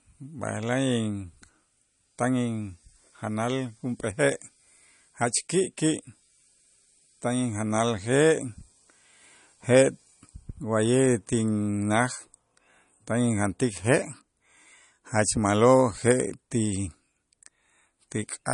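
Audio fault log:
Throughout, MP3 compression: the speech has nothing above about 10.6 kHz, so the top end just stops and s sounds come out dull with a metallic chirp, while the sound has that watery, swirly shimmer and consonant attacks are smeared. That's likely a low-bitrate MP3 encode, something around 40 kbps, where the encoder runs short of bits, chops the treble at a fixed point and lets weak frequency lines flicker on and off between frames.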